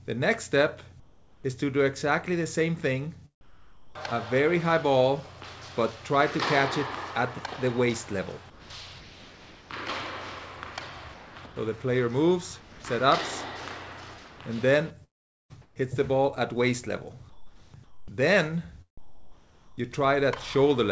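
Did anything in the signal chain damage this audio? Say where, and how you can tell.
Yes. Discontinuous transmission in call processing likely replaced the background with comfort noise at 1.0–1.44, 3.41–3.95, 8.5–9.7, 11.14–12.84, 14.18–15.76 and 17.30–19.83 s. The real ambience becomes flat, featureless hiss, about 10 dB quieter in the first two gaps.

A network stall likely caused a long network dropout from 15.04 to 15.52 s, losing about 460 ms. Concealment stretches the last sound briefly, then near silence remains until audio resumes.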